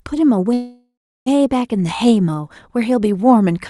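From 0.53 to 1.28 s the speech stops and is replaced by a fading buzz-like continuation that drops to about 0.32 s of silence. It then resumes where it left off, about 0.73 s late and with nothing lost. This is a call audio freeze, likely from packets delayed until the jitter buffer ran dry.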